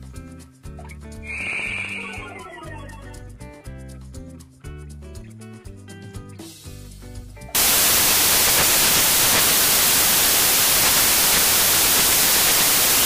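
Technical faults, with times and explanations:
7.55–13.05 s, samples built from the wrong bytes: the reader misassembles each sample's bytes, so the rapidly changing low bits dominate, producing loud, harsh broadband noise until the end.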